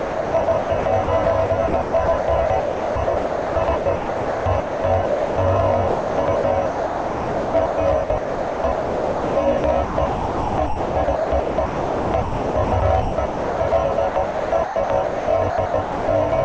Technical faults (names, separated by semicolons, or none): sound chopped by the voice detector